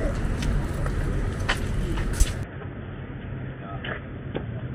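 An input switched to a poorer device, likely, at 2.43 s: with no gap, the sound abruptly turns dull and boxy, losing everything above 3.5 kHz, drops roughly 10 dB in level, and gains a new background noise sitting roughly 30 dB below the signal until the end.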